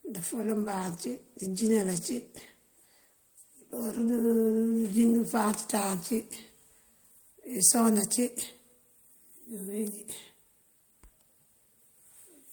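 From 0.57 s to 7.17 s a call bitrate drop coarsens the speech. The encoder was starved of bits, consistent with a fall from about 40 to 16 kbps, held lowest for 4.54 s. Coding turns rough and watery, and high frequencies are trimmed.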